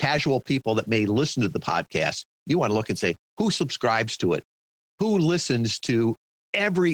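From start to finish, quiet passages of the speech turn gritty, with a grainy distortion that tracks the voice. Noise sits roughly 35 dB below the signal. This points to low bit depth without dither, likely 8-bit rounding, so errors follow the signal.

Opus voice compression is also plainly audible throughout. The voice sounds slightly hoarse and robotic, which fits a low bitrate near 16 kbps. Hybrid coding pairs a speech coder with an upper layer in 20 ms frames. Content still reaches about 20.1 kHz.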